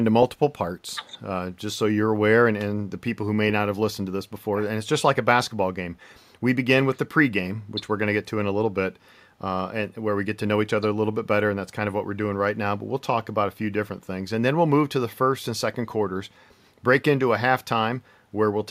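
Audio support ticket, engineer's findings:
No faults found on review.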